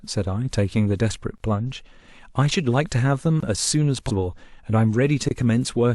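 At 3.40 s there's a gap between chunks: a hole in the speech about 23 ms long, with hard edges on both sides. It sounds like the audio was delivered in pieces, probably 2-second chunks, and whatever joined them left a stretch of silence at the seam. Nothing is missing from the speech itself. It just stops dead and restarts. The same 23 ms hole turns up again at 5.29 s.

Between those, at 4.07 s, you get compressed frames skipped. The decoder never played a few frames, about three of them. That fits frames of roughly 46 ms, so around 150 ms of speech is simply gone and the audio jumps ahead. The join spans about 40 ms, and the speech resumes a little further on than it should.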